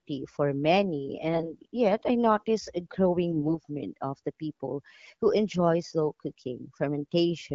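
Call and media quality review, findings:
AMR bit errors, 1.34–1.54 s and 3.32–3.58 s. Speech turns hoarse, scratchy and gargly while pitch and level hold roughly steady. Weak-link corruption of the less protected bits in AMR-WB frames; the checksum on the important bits still passes, so the decoder uses bad data. Misplaced excitation pulses plus skewed fine pitch, gain and spectral values. Second burst longer, first has the higher error rate, around one bit in ten. Wideband coding outside the bursts sounds clear, which fits the 12.65 kbit/s mode.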